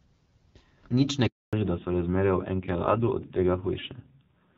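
A speech recording in which the voice fades out within a few tens of milliseconds at 1.27 s and leaves dead silence until 1.53 s, a 260 ms hole where whatever was said is simply gone. This is a handover gap: the call was passed between networks, and no speech frames arrived while the link changed over. From 1.53 s to the end, everything above 4 kHz is missing, and the voice turns dull and rough compared with the clearer, lightly coded HD Voice before the break, which fits AMR-WB at around 12.65 kbit/s. That is a fallback to narrowband: after the handover the call dropped to an older narrowband codec, and the rasp points to a low rate around 5.9 kbit/s.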